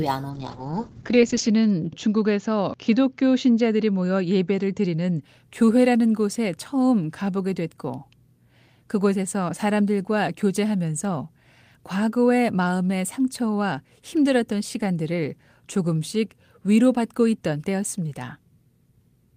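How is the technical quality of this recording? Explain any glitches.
The recording has one glitch. From 0.31 to 5.27 s a call bitrate drop pulls the encoder from 32 to 9 kbps, coarsening the coding and cutting the top band from 20 kHz to 8 kHz. The speech sounds muffled and watery, and a spectrogram shows energy above 8 kHz missing.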